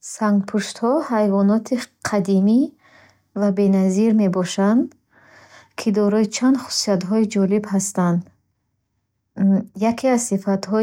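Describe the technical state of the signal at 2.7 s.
At 2.7 s the speech signal is intact, with no audible fault at that moment.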